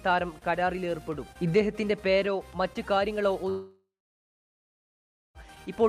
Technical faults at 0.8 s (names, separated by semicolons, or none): none